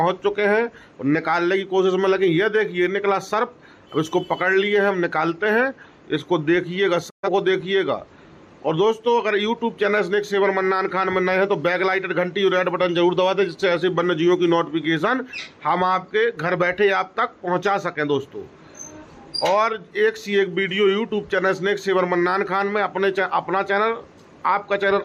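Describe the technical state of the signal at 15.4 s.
At 15.4 s the signal is intact, with no audible fault at that point.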